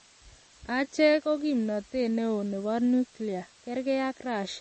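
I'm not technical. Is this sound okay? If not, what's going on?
No. Two problems run through the whole clip, from start to finish.

The first is low bit depth with dither. The speech is stored with very few steps between quiet and loud, which fits 8-bit audio. A small amount of random noise was mixed in before rounding to hide the harsh distortion this would cause. What's left is a steady, even hiss behind the voice, fairly loud compared with the speech itself, but clean and without crackle.

The second sounds watery and swirly, with a dull top end: nothing is present above 8.3 kHz, so the crisp edge of s sounds is missing. The likely cause is MP3 compression squeezed hard to save space. The encoder cuts the treble at a fixed point and drops weaker details, which flicker in and out moment to moment and make the speech sound smeared and metallic.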